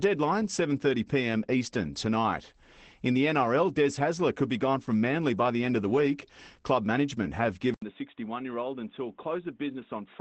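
A speech recording carrying audible Opus voice compression throughout: nothing above 8.5 kHz survives, and the coarse excitation coding of SILK mode at about 12 kbps leaves the voice muffled, slightly hoarse and faintly robotic, consistent with 20 ms frames at a wideband setting. At 7.74 s, just after "management have", an 80 ms silence opens onto narrower, duller sound with nothing above 3.8 kHz, a level drop of about 5 dB and a faint new noise floor, lasting to the end. This most likely reflects the input being switched to a poorer device.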